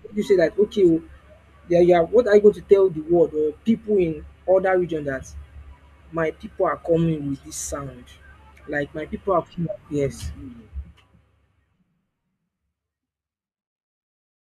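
No technical faults are audible.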